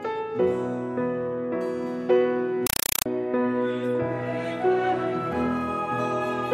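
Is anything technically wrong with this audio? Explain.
Yes. From about 2.67 to 3.06 s the sound drops out and is replaced by harsh, very loud chattering static: a compressed stream played as audio. What's happening is that an AC-3 (Dolby Digital) bitstream is being treated as ordinary PCM samples instead of being decoded. Each encoded frame comes through as a roughly 4 ms burst of noise followed by silent padding, repeating at 31.25 per second, which gives that rapid rattling texture.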